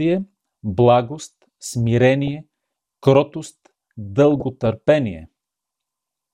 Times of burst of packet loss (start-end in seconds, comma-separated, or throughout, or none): none